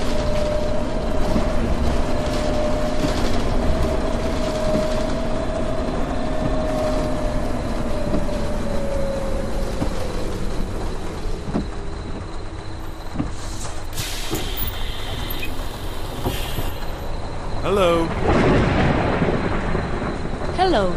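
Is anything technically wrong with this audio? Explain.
Yes. There is one fault: loose connector crackle, from about 16.15 to 16.23 s. It lasts roughly 85 ms. A worn or dirty contact in the signal path lost and regained connection many times in quick succession as it shifted. Each break cut the signal off, and each reconnection brought it back abruptly. That rapid chopping is heard as a short, irregular burst of crackle or scratching laid over the sound.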